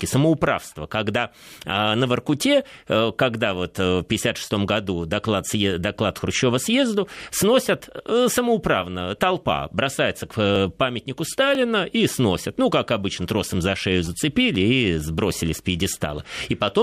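From 10.56 s to 15.55 s, after "сносят самоуправно толпа бросается", periodic USB or driver dropouts skip roughly a millisecond of audio about every 1.0 s, leaving about seven regular ticks. A spectrogram shows evenly spaced thin vertical broadband lines, and the waveform shows small jumps.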